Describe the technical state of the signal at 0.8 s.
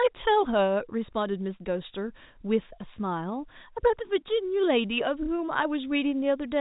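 At 0.8 s the speech is intact, with no fault present, only the ordinary G.711 telephone coding that leaves nothing above about 3.8 kHz.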